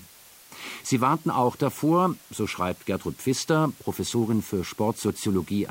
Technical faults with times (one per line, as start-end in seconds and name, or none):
0.00-5.70 low bit depth with dither